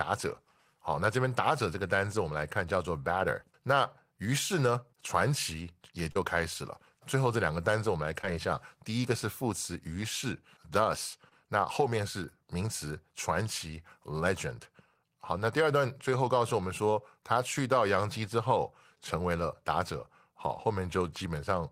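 A speech recording with short concealed packet loss at three points: 6.11 to 6.17 s, 8.21 to 8.25 s, and 11.29 to 11.33 s. About 40 ms of audio went missing at the first point and 20 ms at each of the others. The decoder papered over each gap by extending the preceding sound, then cross-faded back into real audio. The result is a brief smear or wobble. A short sound inside a gap can disappear.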